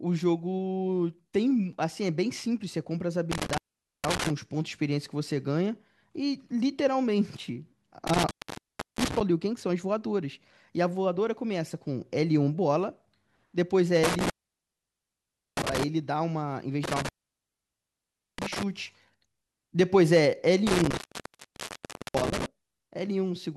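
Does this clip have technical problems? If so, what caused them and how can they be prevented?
Yes. An intermittent contact cuts the speech out five times, at 3.32, 8.07, 14.04, 16.84 and 20.67 s. The gaps last 0.46 to 1.3 s. A loose plug or cable briefly opens the line, crackling at each edge. Reseat connectors firmly and replace worn cables.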